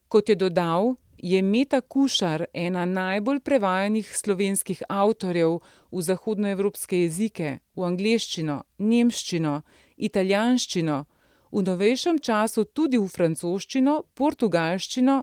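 No technical faults can be heard anywhere in the recording. The speech runs on without any interruption or disturbance to point to.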